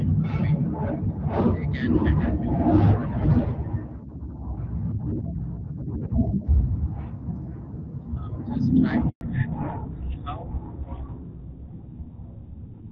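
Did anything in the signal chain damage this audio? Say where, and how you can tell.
Yes. A handover gap runs from 9.09 to 9.21 s, at the network stage. The speech collapses within a few tens of milliseconds and stays silent for 120 ms before sound resumes. While the call was being passed from one network to another, no speech frames reached the decoder. Whatever was said in that window was never delivered and cannot be recovered downstream.

A fallback to narrowband, a codec-stage fault, begins at 9.21 s and lasts to the end of the clip. Before the gap the speech has the fuller top end of HD Voice, which fits AMR-WB at about 12.65 kbit/s. After it, nothing remains above 4 kHz, and the speech sounds duller and rougher. That abrupt loss of band points to the new link carrying GSM full-rate coding at around 13 kbit/s.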